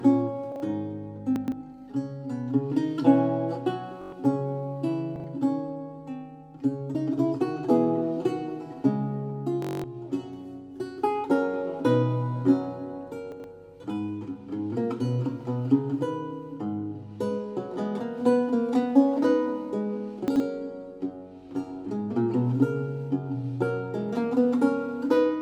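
At 0.52, 1.36, 5.16, 13.32 and 20.28 s, chunks out of order: a 40 ms block plays one to three blocks late, producing a brief jumbled shuffle, yet nothing goes missing. Bluetooth stutter at 4.02–4.12 s and 9.62–9.84 s differs: a short slice repeats as a machine-gun buzz covering roughly 107 ms and 213 ms of lost audio, which fits about five and ten dropped packets, then the sound jumps ahead as though it had kept playing.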